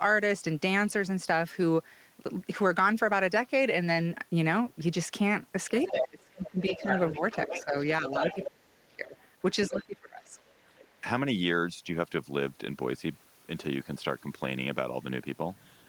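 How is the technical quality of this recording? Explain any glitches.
The recording has audible echo-control trouble in the middle of this speech clip, from about 5.8 to 11.05 s.

Other side's voice leaking through: a second voice is heard from 5.8 to 8.46 s, nearly as loud as the talker. Fainter traces return at 9.19 to 9.83 s and 10.38 to 10.94 s. The likely cause is loudspeaker playback that the echo canceller did not fully remove. Unlike double-talk suppression, this is an added voice rather than a loss of the talker.

Speech suppressed in double talk: the talker's level falls sharply, by roughly 30 dB, in pieces between 5.91 and 9.16 s. It falls by about 25 dB from 9.69 to 10.36 s, and there is a brief slight dip at 11.01 to 11.05 s. This likely happened because the canceller turned everything down while both sides spoke. Unlike a dropout, the gaps follow the overlap with the other voice.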